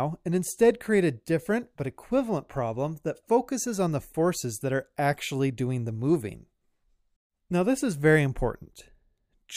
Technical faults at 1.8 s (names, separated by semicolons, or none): none